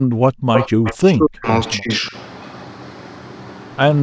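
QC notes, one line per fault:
0.00–0.36 s, background gated by the echo canceller: the room tone at the start falls away sharply, dipping by about 40 dB at its deepest, with around 0.3 s of the span affected before the background returns. The echo canceller clamped the microphone path hard while far-end audio was playing from the loudspeaker, so the ambient bed is switched off rather than faded. The abrupt drop and recovery are what make the gating audible.
0.54–0.94 s, echo leak: a second copy of the speech sits 234 ms behind the original, at roughly the same level as the direct sound, which gives a doubled, smeared quality across this stretch. The likely cause is a far-end loudspeaker setup whose echo canceller failed to fully subtract what its microphone picked up, sending the residual back down the line. Because the echo is as strong as the direct speech, it reads as an overlapping repeat rather than a faint tail.
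0.55–1.48 s and 1.77–2.14 s, speech suppressed in double talk: the talker's level collapses in patches, by roughly 40 dB in the first span (about 0.7 s affected in total) and roughly 20 dB in the second (about 0.3 s), so the speech sounds chopped and intermittently missing. This is likely the echo canceller attenuating everything while both sides spoke at once, unable to separate near-end speech from loudspeaker echo. The first span overlaps the echo leak, so the leaked copy and the suppression compete over the same stretch.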